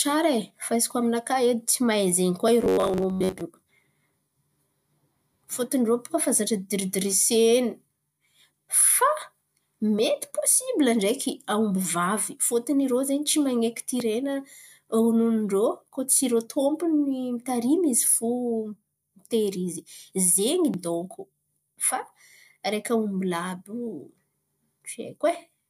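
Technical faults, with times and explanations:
2.62 to 3.41 s, robotic sound from repeated short buffers. The speech turns into a rigid, metallic buzz for under a second. The buzz sits at 93.8 Hz. The rough shape of the words still comes through. The likely cause is audio arriving too slowly, so playback keeps looping a segment of about 10.7 ms. Looping that often creates the fixed tone. Most of the real audio in this stretch is skipped.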